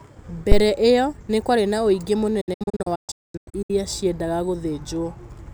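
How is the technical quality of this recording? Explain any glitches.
The speech recording has two clear glitches: a low thump near the start and a patchy dropout in the middle.

At 0.52 to 0.65 s, just before "ĩyo nĩ kwarĩ na", a deep thump punches in and dies away within about 29 ms. This is a phantom power thump: a supply switched on or off on a live input sends a voltage step through the coupling capacitors.

From 2.41 to 3.70 s, right after "nĩ kwarĩ na ũingĩ", the speech breaks into silent holes with fast fades of about 8 ms. The holes total 800 ms across 1.28 s, and the longest lasts 224 ms. This is a digital broadcast dropout: the receiver muted each time frames failed, and the audio in those gaps is gone.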